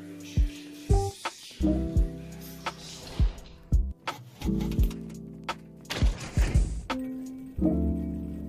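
No technical faults can be heard anywhere in the recording; the signal stays steady and intact throughout.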